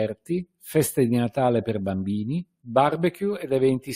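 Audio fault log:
No audible faults found anywhere in the speech clip.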